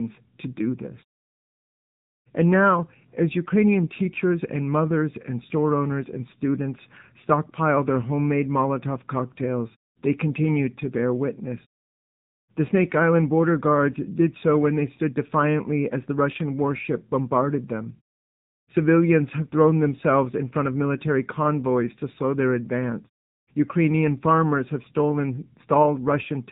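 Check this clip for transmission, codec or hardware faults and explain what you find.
One codec fault runs through the whole clip. AMR narrowband mobile codec: the speech was coded as AMR-NB, at a low rate consistent with about 7.4 kbps, so nothing above 3.8 kHz survives, leaving thin, buzzy, synthetic-sounding speech. The pauses drop cleanly to silence, as muted pauses should.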